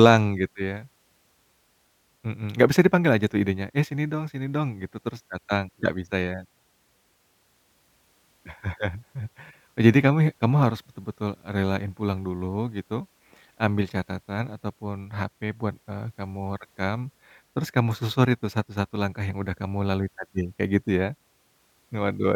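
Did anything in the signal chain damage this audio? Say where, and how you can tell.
No, nothing along the signal chain has damaged this speech recording, and it arrives intact at every stage from capture to playback.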